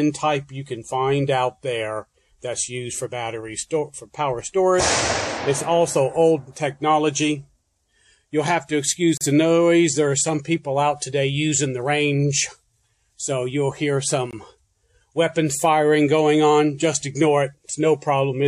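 The audio drops into brief silences at 9.17 to 9.21 s (35.5 ms) and 14.31 to 14.33 s (20.3 ms), then resumes where it stopped. These are gaps at joins of encoded pieces, where separately encoded sections were joined with their encoder delay and final-frame padding left untrimmed.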